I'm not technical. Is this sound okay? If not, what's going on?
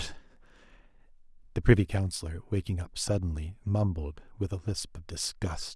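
Yes, the recording is technically sound, with nothing wrong to be heard anywhere in it.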